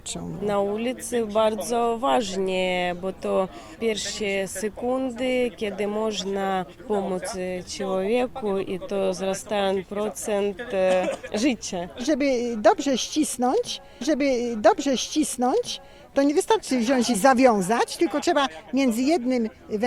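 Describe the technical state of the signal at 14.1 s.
At 14.1 s the signal is inside a stream segment repeat that runs from 14.00 to 16.00 s. The player queued the same stretch of the stream twice, so about 2.0 s of material plays a second time, with a small blip where playback jumps back. On a waveform the envelope between 14.00 and 16.00 s matches the preceding two seconds. A spectrogram shows the same patterns twice in succession, split by a thin vertical seam at the jump.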